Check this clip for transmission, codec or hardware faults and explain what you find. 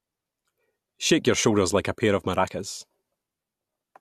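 No faults turn up on checking this clip, so there is nothing to explain.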